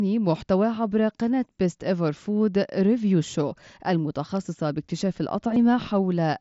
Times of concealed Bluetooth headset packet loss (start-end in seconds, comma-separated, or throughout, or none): 0.75, 5.54-5.56